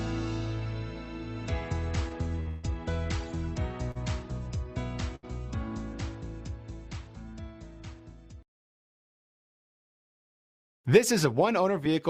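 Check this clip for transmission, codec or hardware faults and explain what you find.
Three network-timing faults appear, all from late packet delivery.

From 2.03 to 2.65 s the sound drags and stutters in repeated stalls: four holds totalling 239 ms, the longest 150 ms. Late packets kept emptying the jitter buffer, so the receiver extended the last sound each time.

At 3.91 to 3.97 s (41 ms) and 5.15 to 5.25 s (75 ms), a sound is held too long with a slight buzz or dip. These are short stalls from a late packet, with the last audio stretched until it arrived.

From 10.60 to 11.88 s the audio runs hurried at 105% speed, same pitch. This is a jitter buffer speed-up, trimming about 70 ms in small pieces to shed excess buffered delay.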